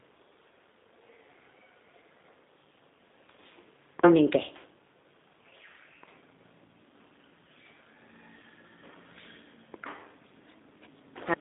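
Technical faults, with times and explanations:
Throughout, G.729 codec: the speech is held to a telephone band of about 250 Hz to 3.7 kHz, with nothing above 3.8 kHz, and the coding damage is plainly audible as a rough, synthetic quality. Rather than keeping the waveform, the codec rebuilds each 10 ms frame from a vocal tract filter, a pitch predictor and a few pulses, which fits an 8 kbit/s G.729A stream. A plain band-limiting filter would narrow the sound without adding that artificial texture.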